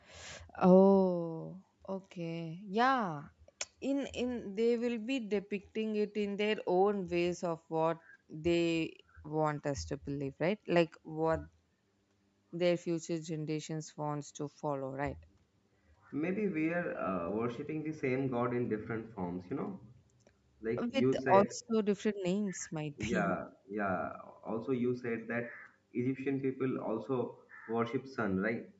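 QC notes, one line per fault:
Throughout: Bluetooth LC3 compression. The speech has plainly audible codec damage: a breathy, grainy edge on the voice, with the upper part of the band sounding synthetic rather than natural. This is likely the LC3 codec of Bluetooth LE Audio working in 10 ms frames at a rate that fits roughly 48 kbps. At that rate much of the upper spectrum is zeroed and replaced with noise fill, which gives the hiss-like texture. Nothing reaches above 8 kHz, which fits the wideband limit of the call microphone path.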